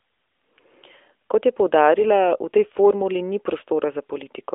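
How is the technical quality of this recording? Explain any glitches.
There are no glitches here: the speech comes through a narrowband mobile link, most likely the AMR narrowband mobile codec at its top 12.2 kbps mode, with the band held to roughly 300 Hz to 3.6 kHz, nothing above about 3.7 kHz, and only light coding texture audible.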